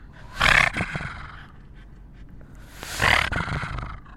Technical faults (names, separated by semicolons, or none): train of clicks